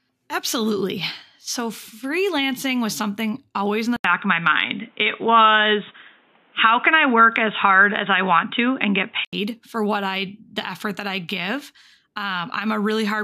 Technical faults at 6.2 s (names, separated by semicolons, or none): input switched to a poorer device